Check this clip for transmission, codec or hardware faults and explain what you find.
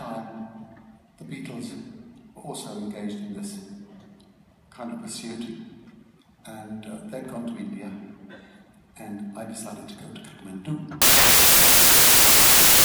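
One fault is present: a wrong sample width over the last stretch, from 11.02 s to the end at 12.85 s. Here 16-bit integer audio is being read as packed 24-bit integers, so each value is assembled from three bytes that straddle two original samples. Only some of those values retain the real signal's top bits, and the rest produce loud noise. The sound turns harsh and hissy, with the original buried underneath, running 1.5 times too fast and pitched up by that ratio. On a waveform the trace jumps to a dense, loud fuzz. A spectrogram shows broadband noise filling every band, with faint, upward-shifted traces of the original's structure showing through.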